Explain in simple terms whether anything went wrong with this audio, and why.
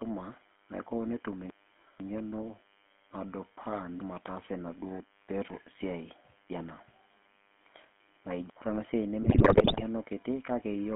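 A few things went wrong here, and you can hear all of them.

Running under the whole clip is a DECT cordless phone buzz. That's a thin, steady hum at 100 Hz. It comes from a cordless phone or its base sitting close to the recording gear. The phone sends a short radio pulse every hundredth of a second, and the audio circuit picks that up and turns it into sound. It's fairly quiet compared with the speech.

The speech has also been squeezed through the GSM full-rate codec, the original digital mobile phone codec. It rebuilds the voice from a rough model plus a sparse train of pulses, so the voice comes out buzzy and gravelly. It also loses everything outside the old phone band, roughly 200 Hz to 3.4 kHz, which makes it sound thin and boxed-in. The damage is easy to hear throughout.

Near the end, from about 9.22 to 9.83 seconds, there's a burst of GSM bit errors. Over a weak mobile link, corrupted data reached the decoder, which scrambled its settings for pitch, tone and loudness. 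For that stretch, a bit over half a second, the speech falls apart into squawks, pops and gargling before it recovers.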